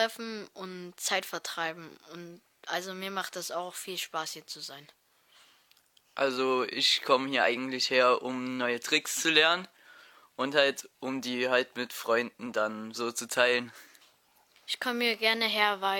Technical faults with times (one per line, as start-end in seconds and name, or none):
none